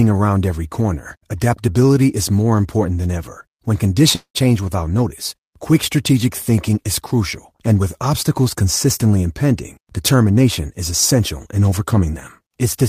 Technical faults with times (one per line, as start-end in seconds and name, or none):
4.15-4.38 long network dropout